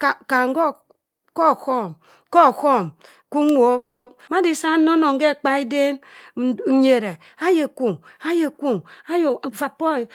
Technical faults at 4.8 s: jitter buffer slow-down

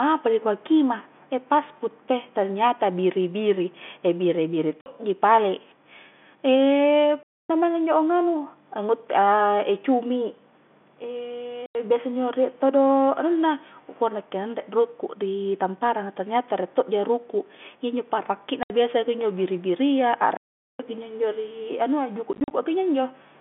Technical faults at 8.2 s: none

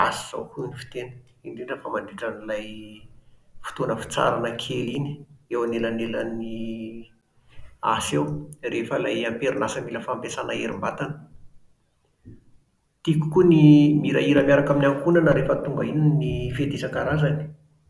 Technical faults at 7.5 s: none

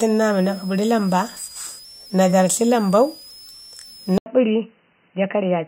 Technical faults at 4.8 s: switching supply whistle; input switched to a poorer device

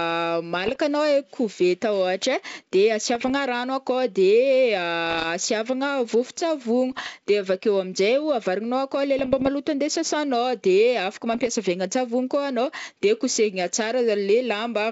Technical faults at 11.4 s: bit errors on an ADPCM link

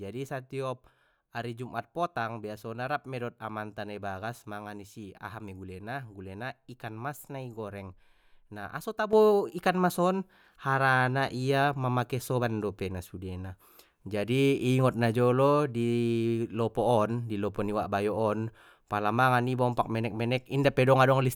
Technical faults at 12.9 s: sudden gain jump

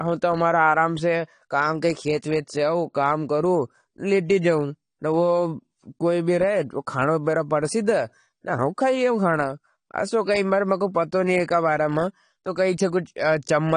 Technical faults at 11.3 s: AAC compression

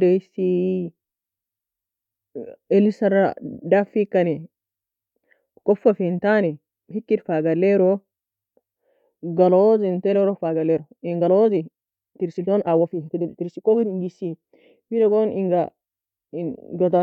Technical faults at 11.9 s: time-stretched section

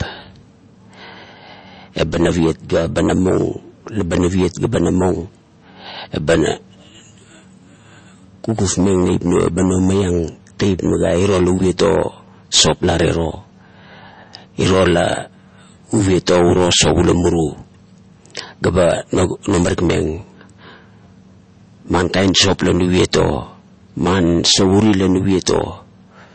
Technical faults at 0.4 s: MP3 compression

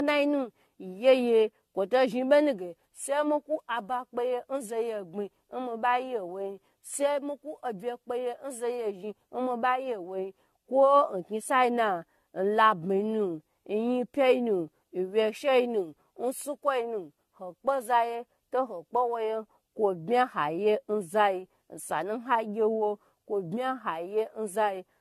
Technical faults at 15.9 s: generation loss

